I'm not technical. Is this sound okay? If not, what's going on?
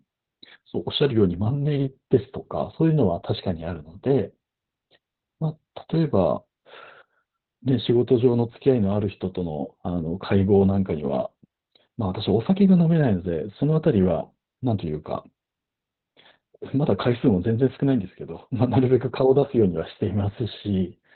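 No. From start to finish the speech sounds muffled and hoarse, a bit like a poor phone line, with a faintly robotic edge. The cause is Opus voice compression squeezed very hard. To save space, the coder throws away everything above about 4.3 kHz, which is where the crisp detail of consonants lives. It also rebuilds the voice from a rough model in 20-millisecond chunks, which makes it sound rough and buzzy.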